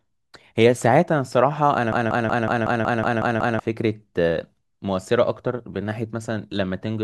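Speech with a broken-record loop from 1.93 to 3.60 s: a 185 ms fragment repeats nine times back to back, likely a stalled player or stream, losing the intervening audio.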